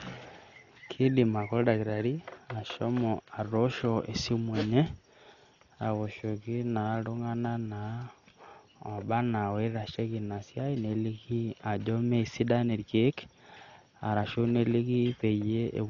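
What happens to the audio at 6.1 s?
Clock slip clicks are running through 6.1 s, part of a series of faint, regular ticks from 0.21 s to 15.5 s, arriving roughly every half second, about thirty in all. They likely come from two devices running on unsynchronised clocks that disagree by something like 50 parts per million, so a single sample is dropped or repeated each time the drift adds up to one whole sample. Each slip leaves a tiny discontinuity in the waveform, heard as a small tick over the speech.

Dolby Digital compression also affects this moment, as it does the whole clip. The speech sounds dull and band-limited, with nothing above 7 kHz, and a rough, fluttering noise sits around the voiced sounds. This heavy damage points to a low bitrate of about 40 kbps. At that rate the encoder narrows the band and leaves many frequency lines without mantissa bits, and the decoder fills those lines with dither noise.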